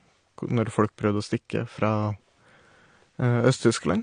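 Throughout the speech, the signal was likely squeezed through AAC compression at a low bitrate, with the damage suggesting something around 32 kbps, too few bits for the encoder to describe the full spectrum. To save space it discarded everything above about 9.7 kHz and coarsely quantised what remained. The voice therefore sounds dull and muffled, lacking its top-end air, and the codec damage is plainly audible as a smeared, warbling texture.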